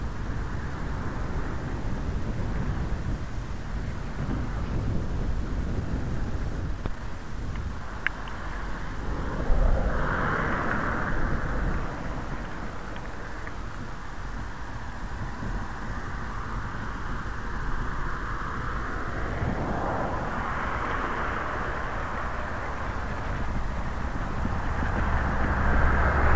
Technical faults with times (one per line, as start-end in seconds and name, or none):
4.66-4.68 skip ahead
4.78-8.51 jitter buffer speed-up